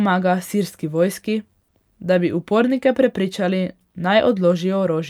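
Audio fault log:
1.63–1.70 s: short stall from a late packet, just after "sirski vojski". The jitter buffer ran dry, so the last sound was stretched about 50 ms, with nothing lost.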